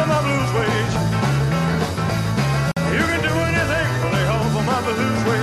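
Separately encoded pieces of this audio were joined without trimming encoder delay and padding, leaving a gap at the join: a 50 ms gap at 2.72–2.77 s, with smeared edges.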